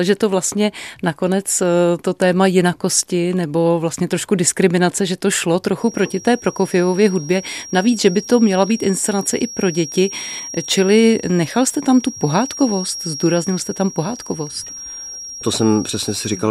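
From 5.73 s to the end, a feedback whistle sits under the speech. A thin 5.6 kHz tone wavers about 15 dB down, likely from a speaker-microphone loop near instability.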